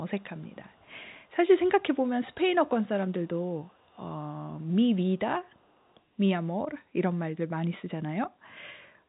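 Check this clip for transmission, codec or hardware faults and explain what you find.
One fault shows up, an echo leak, heard in five short stretches: 0.19–0.92 s, 1.10–1.31 s, 2.29–2.35 s, 3.69–3.99 s and 5.50–5.95 s. Each time, a faint copy of the speech returns 362 ms behind the original. It sits roughly 30 to 40 dB below the direct speech and is most noticeable at 2.29 s. The likely cause is a loudspeaker at the far end whose echo canceller did not fully subtract what its microphone picked up, so the leftover was sent back down the line. The G.711 telephone band stops near 3.8 kHz, so the returning copy is as narrow as the direct speech.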